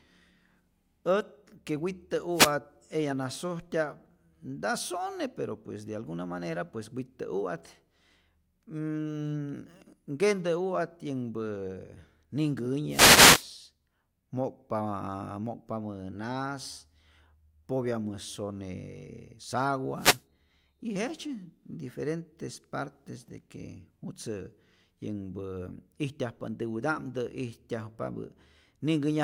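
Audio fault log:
2.32–2.54 s, 12.88–13.48 s, 19.95–20.23 s: wireless microphone noise hits, brief bursts of static swishing over the speech as the FM radio link fades and receiver noise rises.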